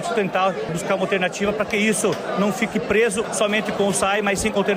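No technical faults can be heard anywhere in this clip.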